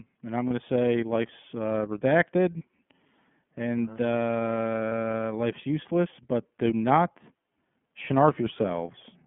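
iLBC codec, throughout the speech: the sound is held to a narrow 150 Hz to 3.4 kHz telephone band, and each frame is coded independently. This leaves plainly audible roughness and a synthetic edge, consistent with the 13.33 kbps mode and its 30 ms frames.

Lost iLBC frames at 0.48 to 0.52 s, 2.58 to 2.62 s and 4.89 to 4.92 s: each time, one 30 ms frame drops out. The decoder fills each gap by repeating the last pitch cycle blended with noise, which sounds like a brief buzzy, held vowel. Clean speech returns almost immediately afterwards.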